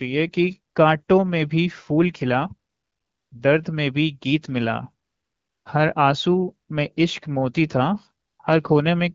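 AMR comfort noise fills gaps at 0.73 to 0.75, 1.03 to 1.07, 2.69 to 3.31, 5.05 to 5.65 and 8.25 to 8.39 s. The phone stopped sending speech frames. Smooth synthetic noise replaces the real background and switches in and out. The speech around it has light wideband coding, which fits about 12.65 kbit/s.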